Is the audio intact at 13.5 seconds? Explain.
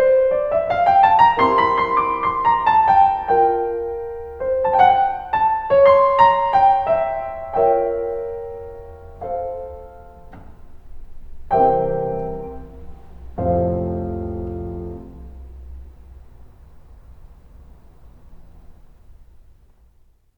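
Yes, the music plays through 13.5 seconds without any audible fault at that moment.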